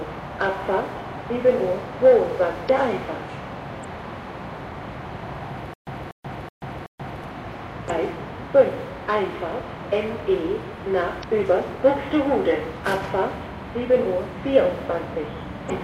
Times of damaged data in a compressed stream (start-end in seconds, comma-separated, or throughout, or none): 2.65-2.69, 7.86-7.90, 11.20-11.24, 15.66-15.71